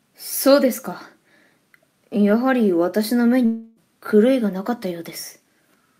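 At 3.45 s the sound smears into a fading buzzy hiss that runs to about 3.80 s, never dropping to true silence, then picks up with roughly 0.32 s of material gone. That's likely a long network dropout, with the receiver concealing the gap by stretching the last audio.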